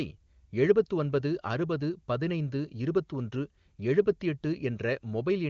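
Nothing technically wrong turns up in this bit of speech, which comes across as ordinary HD Voice over the AMR wideband codec at its top rate of 23.85 kbit/s, with the usual ceiling of about 7.3 kHz.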